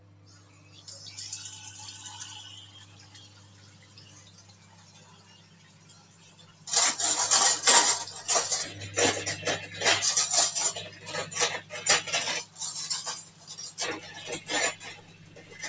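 A speech-style noise suppressor has been left running over the whole clip, and these sounds aren't what it was built for. It treats anything steady or lingering as background noise and pulls it down, so the level keeps swinging, by something like 20 dB between what it passes and what it clamps. You hear the sound pump and thin out instead of sitting at a stable level, with sustained parts and tails sinking while sharper onsets get through. The band tops out around 8 kHz, which is just the call's microphone path doing its normal job.

The places where the suppressor cuts the sound hardest come at 0 to 0.86 s, 2.63 to 6.67 s, 13.25 to 13.52 s and 14.95 to 15.58 s. In each, the suppressor decided the sound was noise and ducked it by about 9 dB, or about 8 dB in the last one. The stretch from 2.63 s is the longest, about 4 s. The sound sags and its decay gets chopped short, while only the abrupt bits hold their level.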